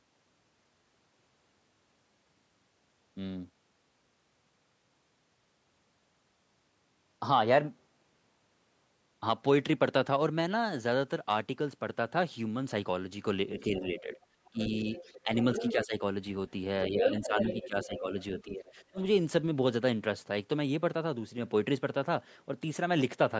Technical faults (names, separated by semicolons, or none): other side's voice leaking through; speech suppressed in double talk